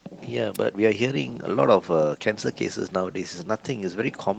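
A wireless microphone noise hit occurs from 0.54 to 0.58 s, a burst of static about 40 ms long. The FM radio link briefly faded as reflected signals cancelled, so receiver noise swelled over the speech, heard above the light Opus coding as a quick swish.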